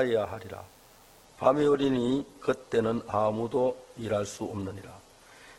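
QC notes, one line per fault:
throughout: DECT cordless phone buzz. A thin, steady buzz sits under the whole clip, well below the main sound, at roughly 35 dB down. It repeats at 100 Hz and carries a dense stack of harmonics. A cordless handset or base nearby sends a short radio burst every 10 ms. The audio circuitry rectifies each burst into a click. The clicks run together into the buzz.
1.24 to 5.59 s: adaptive stream at a lower bitrate. At 1.24 s the quality drops suddenly, with no gap or dropout. From there to the end nothing is heard above about 12.1 kHz. The top end sounds dull, and codec artefacts increase. The stream likely switched from a 64 kbit/s Opus version to one near 12 kbit/s when the connection slowed. The leaner encoding discards treble and detail.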